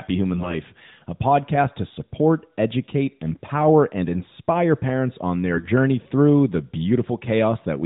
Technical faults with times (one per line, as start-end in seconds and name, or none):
0.34-0.56 AMR bit errors
5.53-5.68 AMR bit errors